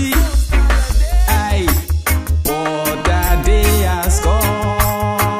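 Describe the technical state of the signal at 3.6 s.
At 3.6 s the signal is intact, with no audible fault at that moment.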